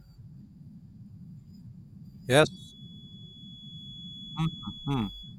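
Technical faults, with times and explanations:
2.41–5.39 s feedback whistle: a thin, steady tone near 3.4 kHz sits around 15 dB below the speech and swells and fades slowly in level until the end. It is likely a loudspeaker-to-microphone loop held just at the edge of feedback, ringing without running away.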